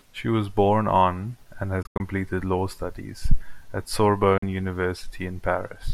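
At 1.82 to 2.01 s the speech breaks into silent gaps totalling 128 ms, the longest 85 ms. At 4.38 s a 43 ms loss follows. Speech resumes further on each time. This is likely a Bluetooth dropout, with wireless packets arriving too late and being discarded.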